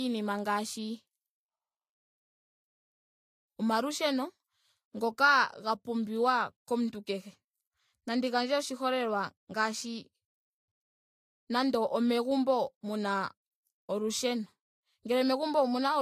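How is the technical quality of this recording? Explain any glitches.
The quality is compromised by stacked compression artefacts throughout the speech. Nothing is heard above about 15.2 kHz. The smearing and swirl point to transcoding between lossy codecs, likely an MP3 encode followed by a low-bitrate Vorbis encode. The second encoder spends its bits on the first one's damage and adds its own. The result is dull, watery and blurred together across all 16 seconds.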